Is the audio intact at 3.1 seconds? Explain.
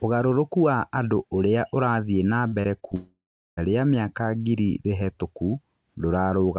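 No. A long network dropout spans 2.95 to 3.59 s, likely from lost packets. A fading concealment buzz gives way to about 0.37 s of silence, which shows as a flat waveform and a blank spectrogram.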